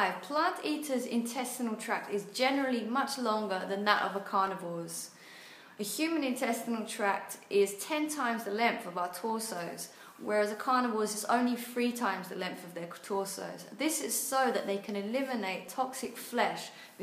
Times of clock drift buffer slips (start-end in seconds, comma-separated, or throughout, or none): 0.61-17.02